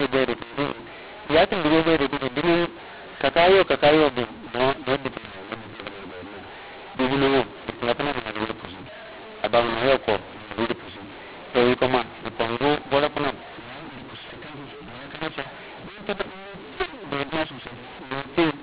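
Throughout, the speech is harsh and distorted and the pauses fill with noise, because G.711 mu-law telephone coding was decoded as A-law, so mu-law and A-law got mixed up.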